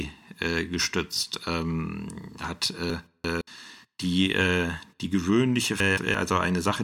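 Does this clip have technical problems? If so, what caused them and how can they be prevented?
Yes, there are chunks out of order at 2.90–3.41 s, right after "äh gestützt ähm hat", and at 5.80–6.14 s, after "die äh die gewöhnliche". A 171 ms block plays late, two slots behind and then one, so the speech jumbles briefly at the hard joins. Reordering incoming blocks by sequence number before playback or writing would prevent it.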